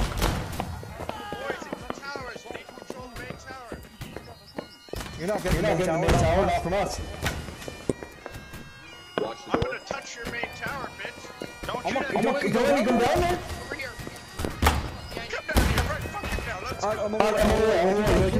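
A sudden voltage step, likely from a plug, switch, static discharge or driver glitch, is added to the signal four times, and the circuits after it shape each step into a brief pulse. The result is a loud pop lasting about 24 ms at 9.62 s, around 20 dB above the surrounding sound. Somewhat weaker pops, about 15 dB above it, follow at 11.91, 13.06 and 14.45 s, with the sound continuing underneath each thump.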